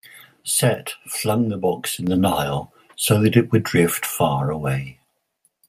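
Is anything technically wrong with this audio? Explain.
Yes. At 2.07 s, just after "flung the box in", the microphone volume steps up by about 6 dB in one jump as the call software raises the device's input volume. Unlike someone simply speaking louder, the voice and background noise jump together, instantly and without a gradual ramp.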